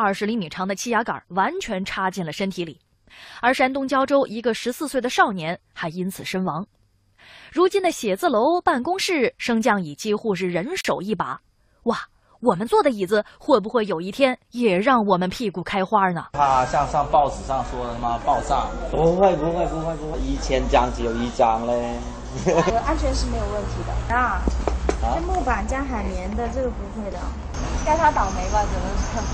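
At 10.81 to 10.85 s there is a gap at a join of encoded pieces. The audio was encoded as separate segments and spliced back together without trimming. The encoder's start-up delay and the padding in its final frame were left in place, so about 38 ms of silence sits inside continuous sound. It is heard as a brief dropout with softened edges, and then the sound picks up exactly where it broke off.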